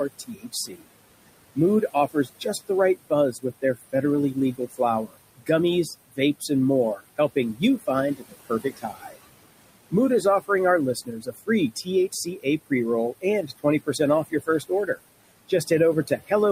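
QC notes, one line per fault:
Throughout: noise suppressor artifacts. The suppressor treats the steady room noise as something to remove and pulls those bands down by about 20 dB, frame by frame. That noise sits about 15 dB below the speech. The background drops away in the gaps and comes back underneath the speech.
0.09–0.86 s, 1.55–5.49 s, 6.08–9.17 s, 9.91–16.31 s: speech cut by the noise suppressor. In these stretches the suppressor mistakes parts of the speech for noise and turns them down with the background, by about 19 to 22 dB at the deepest point. Soft consonants, word endings and quieter passages sound swallowed or faint. The affected portions add up to roughly half a second in the first span, about a second in each of the next two, and about a second and a half in the last.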